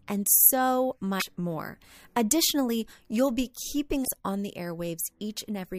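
Brief glitches at 1.16 to 1.22 s, after "and so", and 4.01 to 4.08 s, between "you'll be" and "on the": damaged data in a compressed stream, the decoder misreading corrupted frames and losing sync.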